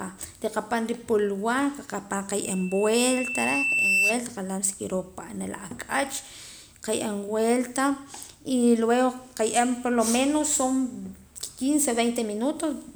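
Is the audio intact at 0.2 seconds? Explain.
Yes, the speech at 0.2 seconds is intact, with no dropout, click, distortion or other fault at that moment.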